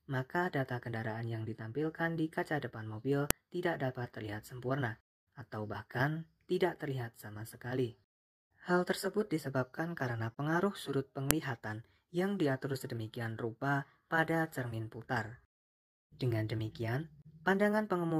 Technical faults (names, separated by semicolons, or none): file header played as audio